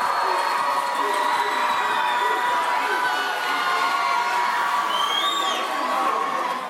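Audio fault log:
4.5 to 5.44 s, unreliable data bit: a marginal data line flips one bit in a random share of samples, each error adding a spike of the same size, about -36 dBFS. The result is a steady crackling fizz laid over the sound, continuing through quiet moments.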